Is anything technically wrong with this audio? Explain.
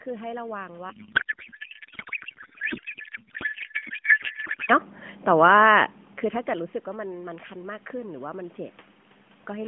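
Yes, there are two faults.

From 0.90 s to 4.70 s there is a codec payload misread. The speech turns into garbled noise and warble that barely tracks it. The narrowband mobile codec is working, but the two ends disagree on how its bits are packed. The sound points to octet-aligned AMR frames being read as bandwidth-efficient. Every field lands in the wrong place, so the decoder builds nonsense from valid-looking frames. Clean sound returns only once both sides agree again.

From 5.3 s to 5.65 s the automatic gain is falling. The control judged the input too loud, or its background noise too strong, and pulled its gain down by about 3 dB. The drop is gradual, not a step. The voice and the room noise behind it sink together. That shared fall sets it apart from a talker moving away, where the background would stay put.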